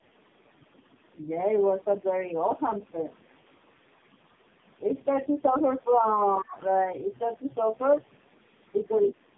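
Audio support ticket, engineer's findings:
Tandem speech coding, whole clip: speech rough, muffled and warbly. The sound points to three speech codecs in a row, each re-encoding the previous one's already degraded output. Spectrogram: hard ceiling near 3.6 kHz, smeared formants, speckled, swirling harmonic texture throughout.

Speech suppressed in double talk, 6.4–6.57 s: talker level dips by roughly 20 dB for around 150 ms. Likely echo-canceller suppression while the far end spoke over this side. Waveform: sudden narrow notch in the envelope. Spectrogram: brief faded stripe across the band.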